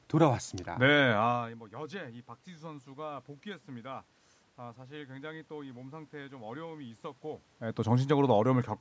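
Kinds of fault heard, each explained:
No system faults are present: the signal carries the usual call microphone processing, with nothing above 8 kHz and the lowest bass rolled off, along with the room's own background noise and level changes from the talker moving near 1 s and 7.5 s.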